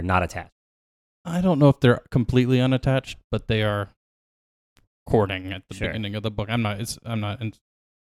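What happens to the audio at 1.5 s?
Nothing goes wrong at 1.5 s; the speech carries on intact through that moment, with no dropout, click or distortion.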